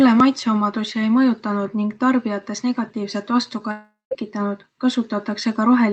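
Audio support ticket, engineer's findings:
Gap at 3.71–4.13 s: sound smears into a fading buzz, then about 0.18 s of near-silence, resuming with material skipped rather than delayed. Likely a long network dropout. Concealment stretched past its limit. Unlike a brief packet-loss glitch, the tail decays fully. Call-path top end stops near 8 kHz.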